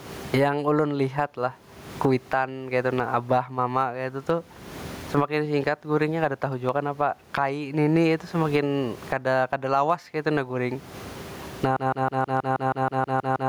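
Gain pumping runs through the whole clip. The room noise sits about 40 dB below the speech. The level swings by around 30 dB. The likely cause is gain set far too high, with a fast limiter clamping down.

At 11.76 s a broken-record loop begins and lasts to the end. A fragment of about 0.16 s repeats exactly, back to back, eleven times. The stream likely stalled and kept resending its last piece. The audio meant for that stretch is lost.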